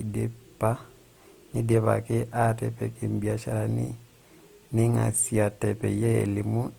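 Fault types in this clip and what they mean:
Opus compression: the speech is plainly grainy and rough throughout, with noisy highs rather than swirl, likely from a music-mode Opus encode at around 24 kbps.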